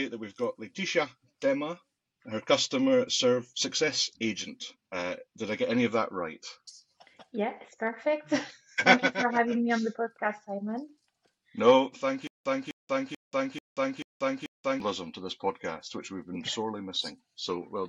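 From 12.27 to 14.80 s there is a stutter with silent gaps. A 255 ms burst repeats six times, each followed by about 183 ms of dead silence, every 438 ms. The likely cause is a stalled stream replaying its last buffered fragment. The intervening sound is lost.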